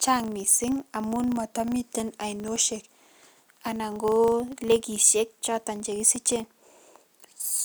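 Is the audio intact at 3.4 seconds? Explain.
No, the filter is restarted on every block across the whole clip, so each 40 ms block starts from silence, giving a 25 Hz buzz that tracks the speech level.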